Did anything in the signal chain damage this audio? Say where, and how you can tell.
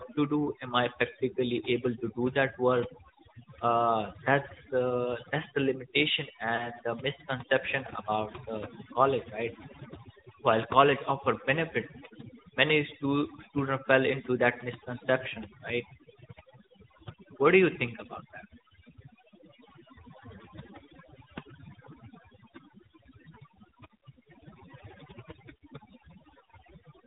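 Yes. The background drops and breaks up into twinkling specks: overdone noise removal in call processing, cutting bands near its noise estimate.

Throughout, the speech is buzzy and synthetic with nothing above 4 kHz, the codec stage's AMR narrowband mobile codec, with plainly audible damage that fits its 10.2 kbps mode.

At 6.56–6.69 s and at 26.49 s the sound briefly dips or warbles: lost AMR speech frames, each a single 20 ms frame concealed by the decoder from the network stage.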